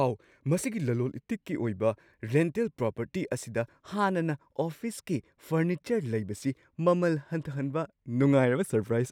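No technical faults can be heard anywhere in the speech recording; the signal stays continuous and stable throughout.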